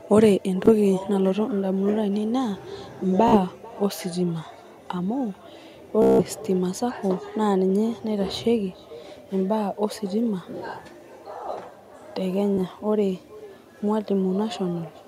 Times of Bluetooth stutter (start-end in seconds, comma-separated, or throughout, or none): 0.66-0.70, 3.28-3.37, 6.02-6.24, 12.54-12.58